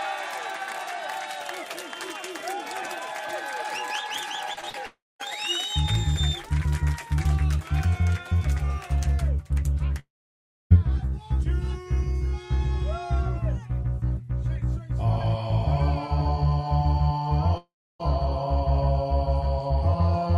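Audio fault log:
4.53 to 4.76 s, short concealed packet loss: three brief gaps at 4.53–4.66 s, 4.61–4.64 s and 4.70–4.76 s, where 40, 20 and 40 ms of audio reached the decoder too late. The receiver bridged each hole by extending the preceding sound, following its pitch if tonal or as shaped noise if not, for 34, 16 and 38 ms, then blended back in. The first gap also stretched the timing a little. Each is heard as a quick smear or wobble, and a brief transient can drop out.
4.86 to 18.01 s, long network dropout: at 4.86–5.21 s, 9.99–10.74 s and 17.57–18.01 s, the audio breaks off for 340, 720 and 420 ms, likely because no packets arrived. The receiver carries the last sound forward as a fading buzz or hiss, which gives way to silence or a low steady floor for 220, 650 and 310 ms. The audio then resumes further on without the lost portion, and the middle gap adds 11 ms.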